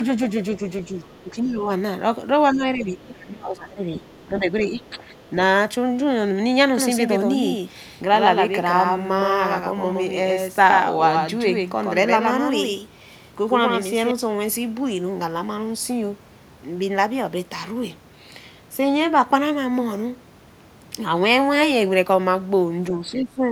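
Speech suppressed in double talk comes first, from 0.58 to 1.68 s. The talker's level sags in patches totalling around half a second, dropping by roughly 10 dB at worst. The likely cause is an echo canceller that could not tell the talker from the loudspeaker echo and attenuated both. Inside that span, at 1.07 to 1.22 s, the other side's voice leaking through appears as a faint scrap, far below the talker. The likely cause is far-end sound reaching the microphone that the canceller failed to remove.

From 2.53 to 5.03 s the suppression returns more heavily, with about two seconds of dipped speech and drops of roughly 15 dB. Leakage is heard again at 2.53 to 3.25 s, this time only some 25 dB down. Fainter traces follow at 4.1 to 4.27 s and 4.85 to 5.3 s.

A doubled audio track runs from 6.77 to 14.11 s. A second full-band copy trails the speech by about a tenth of a second, a few dB quieter, and starts and stops abruptly. 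It has no reverberant tail, so it sounds like a slapback rather than room echo, likely from the signal being captured twice along a slower path.

At the very end, 22.97 to 23.51 s, suppression cuts the speech hard, by around 20 dB. A brief leak of the far side appears at 23.14 s.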